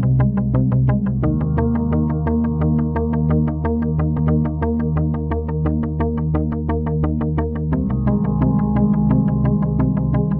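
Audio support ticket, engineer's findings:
Stream segment repeated, 4.14–5.11 s: about 0.98 s of audio plays twice, blip at the jump back. Probable player/segment queue fetching or queuing the same segment again.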